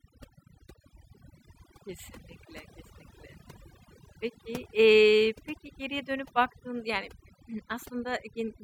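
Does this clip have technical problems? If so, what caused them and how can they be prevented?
Yes. Throughout the speech, the background drops to near silence dotted with twinkling specks. This is overdone noise removal: the reduction was set so strongly that frequency bands near its noise estimate were cut, taking quieter voice detail too. Prevent it by using gentler reduction settings.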